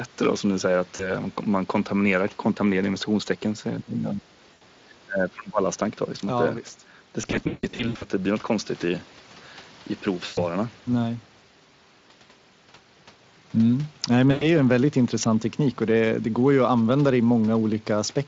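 At 0.95 s the speech smears into a brief fade. This is VoIP packet loss concealed by the speech codec. About 40 ms of audio went missing, and the decoder stretched its last sound to cover the gap.

From 3.79 to 5.63 s the talker dips and breaks up, by up to about 25 dB, for roughly a second and a half in all. The likely cause is speech suppressed in double talk: the echo canceller turned the talker down while both sides spoke.

Inside that stretch, at 4.53 s, another 80 ms is concealed.

From 7.21 to 8.04 s losses are scattered over 800 ms, 460 ms lost in total. The longest gap is 160 ms. Here the missing sound is stretched and fades.

Shorter concealed gaps follow at 10.25 s (120 ms) and 14.31 s (100 ms). Each fades before the speech recovers.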